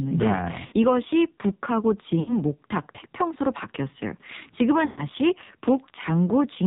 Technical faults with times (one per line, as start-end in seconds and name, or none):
0.00-6.67 AMR narrowband mobile codec
0.66-0.74 lost AMR speech frames
2.20-2.39 lost AMR speech frames
4.86-5.05 lost AMR speech frames